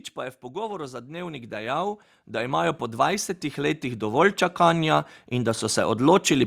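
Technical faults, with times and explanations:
0.51–6.02 s, automatic gain rising: just after "pa je v" the level starts creeping up and keeps climbing for about five and a half seconds, ending roughly 17 dB louder than where it began. The speech and the background noise swell together, which is the giveaway. It's the gain control deciding the input was too quiet and slowly winding its gain up, so everything it hears gets lifted, not just the talker.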